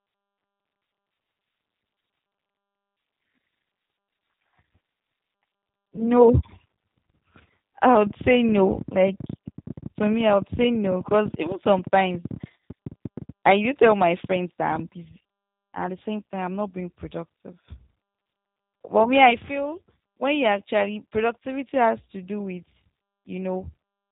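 Throughout, the speech carries G.729 codec coloration consistent with 8 kbit/s coding: nothing above 4 kHz, and a plainly audible rough, synthetic texture from pulse-based excitation. From 5.96 to 6.07 s, VoIP packet loss concealed by the speech codec fills a roughly 20 ms gap, fitting one lost packet, with extrapolated sound that fades and stays weakened briefly afterward.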